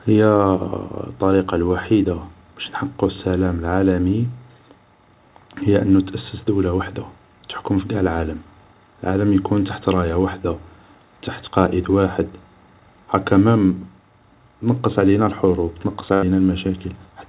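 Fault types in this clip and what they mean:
short concealed packet loss: about 20 ms at 1.46 s, just before "الوحيدة باش نحققو السلام", bridged by continuing the prior sound, which shows as a brief smeared spectrogram patch.
burst of packet loss: roughly 80 ms lost at 16.14 s after "تنقص علينا الحروب تنقص", filled by continuing the last sound and turning it down, which appears as a decaying waveform envelope.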